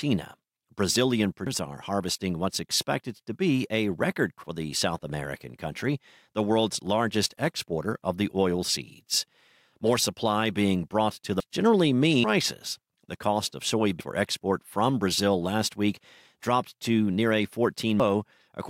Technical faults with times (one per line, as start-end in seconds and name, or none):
1.46 compressed frames skipped
4.44 compressed frames skipped
11.40 compressed frames skipped
12.24 compressed frames skipped
14.00 compressed frames skipped
18.00 compressed frames skipped